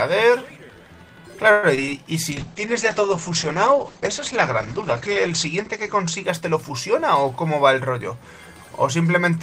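The audio has three kinds of network fault in quick succession. First comes a call audio freeze from 1.51 to 1.65 s. For about 115 ms the last sound is drawn out into a fading buzz rather than continuing. The likely cause is packets held up in transit until the jitter buffer ran dry. The receiver filled the wait, then resumed exactly where it stopped. Nothing is lost, but everything after runs about 115 ms later. Two cases of short concealed packet loss follow, at 1.75 to 1.79 s and 1.85 to 1.89 s. In each, roughly 20 ms of audio never reached the decoder in time. The receiver extended the preceding sound over the hole, for 24 ms and then 15 ms, before blending back. Each is heard as a brief smear or wobble. Then a call bitrate drop runs from 2.31 to 6.99 s. The encoder was pushed to spend far fewer bits, which fits a fall from about 40 kbps to 9 kbps. At the lowest rate, held for about 3.1 s, the coding turns coarse and watery. 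The audio band also narrows from 20 kHz to 8 kHz, so everything above 8 kHz vanishes and the sound goes muffled until the rate recovers.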